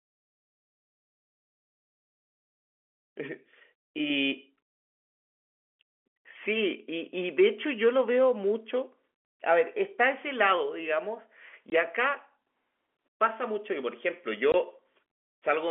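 At 11.7 s and again at 14.52 s, packet loss filled with silence cuts a 20 ms hole in the telephone-band speech, which fits one dropped packet each time. The receiver inserted silence rather than concealing the gap, so each dropout starts and stops abruptly.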